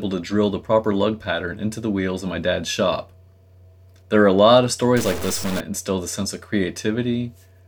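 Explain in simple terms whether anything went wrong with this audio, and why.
From 4.97 to 5.60 s, after "are a lot of", the sound turns harsh and buzzy until "instill the sense of". Likely cause: a stuck bit.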